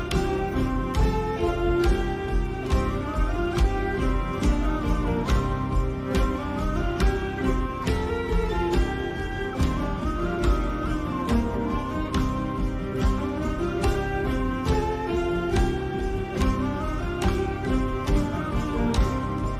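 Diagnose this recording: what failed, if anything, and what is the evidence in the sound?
The converter's sample clock is unstable, so each sample is taken a few microseconds early or late at random, which is sample clock jitter. Because the timing error turns into an amplitude error in proportion to how fast the waveform is changing, the result is a fine hiss or roughness sitting roughly 40 dB below the signal throughout the recording. It swells on loud and bright passages and drops away wherever the sound goes quiet.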